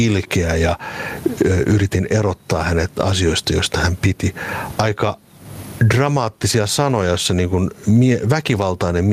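Right through the speech there's gain pumping, a swing of roughly 25 dB. The likely cause is gain set far too high with a fast limiter clamping down. The faint room noise sits about 44 dB below the speech.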